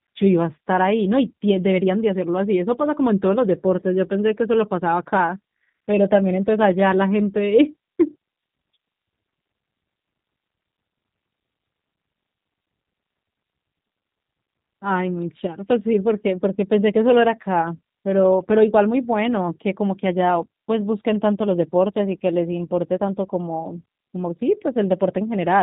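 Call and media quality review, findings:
G.729 codec, whole clip, 0 to 26 s: speech band-limited, nothing above 3.8 kHz; plainly rough, synthetic, slightly buzzy texture. Probable component: narrowband CELP voice codec, consistent with an 8 kbit/s G.729A leg. Speech rebuilt from filter, pitch predictor and sparse pulses, not from the waveform. Distinguishing note: a plain 3.8 kHz low-pass or narrowband resample would sound muffled but smooth. Here the roughness and the parametric, synthetic quality persist throughout.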